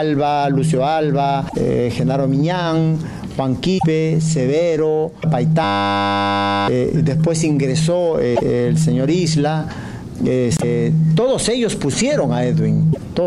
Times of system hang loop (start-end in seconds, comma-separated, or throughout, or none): 5.64-6.68